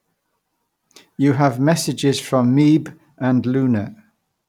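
No technical faults can be heard in the recording at any point, so there is nothing to describe in time order.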